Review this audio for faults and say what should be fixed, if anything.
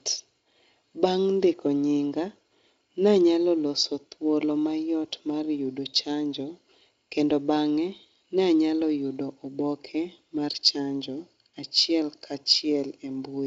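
Nothing here needs fixing: the speech comes through Speex at a generous 34 kbps with nothing that calls for attention, and the top of the band simply stops around 7.7 kHz.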